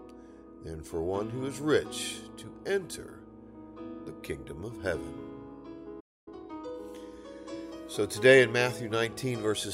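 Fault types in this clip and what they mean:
Playback stall: The player likely ran out of data or was blocked, so the sound drops to silence mid-flow for 0.26 s, starting at 6.00 s.
Time-compressed catch-up: The player trims its backlog by cutting and cross-fading short pieces, so 6.28 to 6.80 s runs 1.5 times fast at normal pitch.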